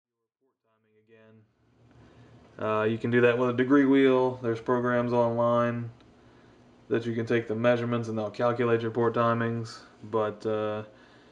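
There are no technical faults to describe; the sound fades in smoothly from the start and reaches full level at about 2.02 s.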